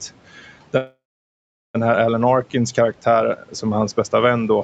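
A call audio freeze runs from 0.77 to 1.76 s. The sound smears into a fading buzz, then 0.76 s of silence, and the speech resumes where it stopped with nothing lost. Delayed packets likely emptied the jitter buffer, adding 0.97 s of delay.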